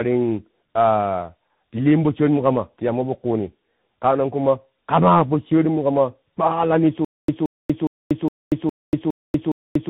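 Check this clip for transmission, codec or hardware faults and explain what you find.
Two faults are present: tandem speech coding across the whole clip, and a stutter with silent gaps from 7.05 s to the end.

Tandem speech coding runs throughout. The speech passed through more than one codec in series, and each stage re-encoded the damage left by the one before. The sound points to a low-rate AMR-NB link at about 7.95 kbit/s, then G.711 A-law, then CVSD, which makes two true speech coders stacked. Nothing is present above 3.8 kHz, so the speech is muffled. It is also gritty and warbling, rougher than any single narrowband codec would leave it. That compounded roughness is what separates this from a plain band-limited phone line.

The stutter with silent gaps begins at 7.05 s, right after "po sharimukama kpanglani", and lasts to the end. A fragment of about 174 ms plays, then about 238 ms of dead digital silence follows, repeating every 412 ms, seven times in all. 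The likely cause is a stalled stream that replays its last buffer on each retry and then runs dry. Because the identical burst returns at a steady rhythm and the gaps are truly silent, this is not random packet loss or concealment smearing. The audio that should have filled that time is gone.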